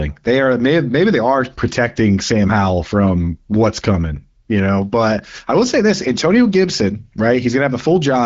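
No technical faults can be heard anywhere in the speech. It has passed through the AMR wideband (HD Voice) codec, which leaves only light coding marks and no content above about 7.6 kHz, consistent with a rate near 15.85 kbit/s.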